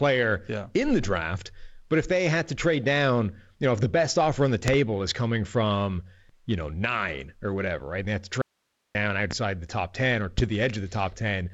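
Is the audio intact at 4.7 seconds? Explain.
No. Between 4.68 and 4.77 s a loud pop occurs. A sudden voltage step or pulse, most likely from a plug, switch, static discharge or driver glitch, has been added to the signal, and the circuitry after it shapes that pulse. The result is two sharp pops in quick succession, peaking roughly 15 dB above the speech, which continues underneath them without a break.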